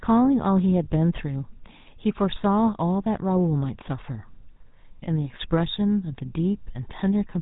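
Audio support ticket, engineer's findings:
GSM full-rate codec throughout: pulse-excited vocal-tract model, band capped at 4 kHz, consistent with 13 kbps. Speech plainly buzzy, gravelly and muffled, top end gone.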